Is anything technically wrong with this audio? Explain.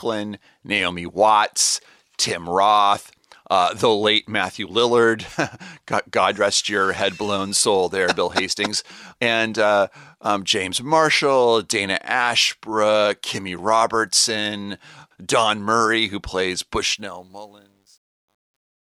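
Yes. From 16.82 s to 18.86 s, just after "who plays", there's truncation distortion on the fade-out, which starts at roughly 16.8 s. The fade stage keeps only about 10 bits with no dither, so the dying speech turns into coarse steps and sounds gritty, worst from 17.41 s to the end.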